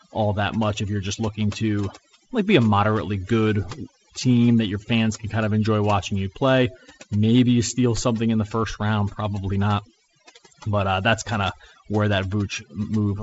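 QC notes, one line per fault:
Throughout, overdone noise removal: a noise reduction stage set far too strong has been cutting individual frequency bands down or out whenever they sit close to its noise estimate, and the quieter parts of the speech are caught along with the background. Between phrases the floor drops and breaks up into twinkling specks. The G.722 wideband link carrying it, with nothing above about 7.7 kHz, adds only light coding damage of its own.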